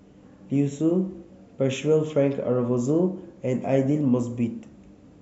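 No technical faults can be heard anywhere in this speech recording. Nothing in the sound points to a problem with how it was captured or carried.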